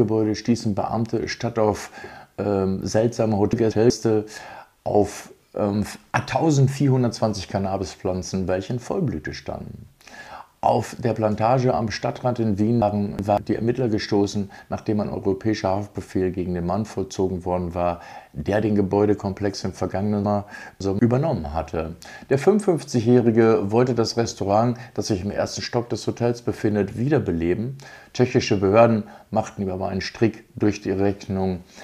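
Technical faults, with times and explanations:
3.53–3.90 s, 12.82–13.38 s and 20.25–20.99 s: chunks out of order. Blocks of about 186 ms play one, two and three blocks too late. Nothing is missing. The jumbled sequence sounds garbled, and each displaced block leaves three hard joins.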